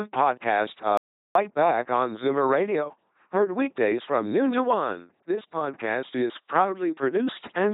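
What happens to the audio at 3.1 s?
At 3.1 s the speech is still passing through an LPC-10 vocoder, as it does for the whole clip. The vocoder swaps the real voice for a short all-pole filter excited by either a buzzing pulse train or noise, each moment forced to one or the other. The result is a heavily damaged, mechanical robot voice with nothing above 3.8 kHz, consistent with a rate around 2.4 kbit/s.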